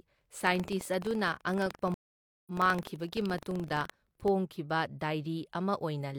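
A steady robotic rattle runs through the speech from 0.00 to 4.30 s, pulsing at 23.4 Hz and present only while there is signal. This is buffer tearing: the writer filling a ring buffer and the hardware reading it have drifted until they meet inside every period. The rate fits a 2048-sample buffer, and in each pass a small sliver, around 2 percent, replays audio about a tenth of a second old, with hard joins on both sides.

At 1.94 s the speech drops out completely for 526 ms and comes back at 2.51 s, but not where it left off. It picks up roughly 0.7 s further on, so a stretch of the speech simply never appears. This is a stream reconnect: the connection broke, playback went silent, and the player reconnected and started a fresh decoder partway through the live stream. Throughout the gap, the tearing rattle stops along with the signal.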